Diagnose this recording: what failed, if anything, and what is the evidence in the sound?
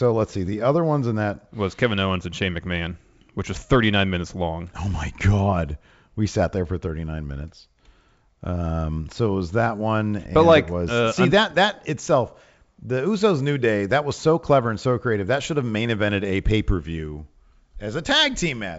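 Nothing failed: the speech bears the stamp of G.722 wideband telephone coding, with its content ending near 7.7 kHz and coding noise faint or absent, which fits the coder's full 64 kbit/s mode.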